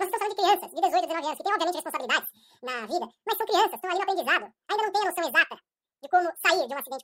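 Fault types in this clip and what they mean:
wrong sample rate: audio played at double its recorded rate, so speech runs twice as fast and an octave higher; spectrogram shows harmonics and formants stretched upward, waveform compressed in time.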